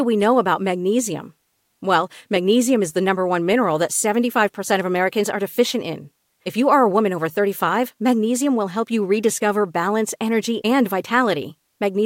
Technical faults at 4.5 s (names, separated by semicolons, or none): none